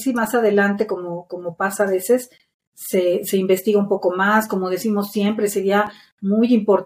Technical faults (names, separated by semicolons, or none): damaged data in a compressed stream